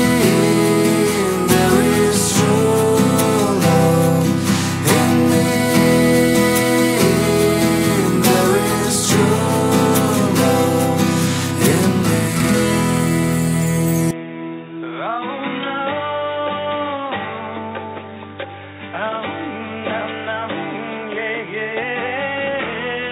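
At 14.11 s the sound turns abruptly dull and boxy with no gap, losing everything above 3.8 kHz, dropping about 10 dB in level and gaining a faint new background noise to the end. The likely cause is an input switched to a poorer device.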